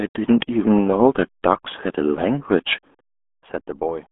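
Throughout, the speech has the RealAudio 14.4 codec's narrow, gargly sound. Everything above about 3.8 kHz is gone, with heavy coding damage, which fits an 8 kbit/s dial-up codec rather than plain telephone band-limiting.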